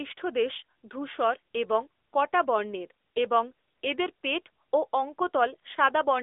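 A speech clip that runs through the AMR narrowband mobile codec from start to end. Nothing passes above 3.7 kHz, and the band sits near 300 Hz to 3.6 kHz. The buzzy, synthetic texture fits a mid-rate setting around 10 kbps.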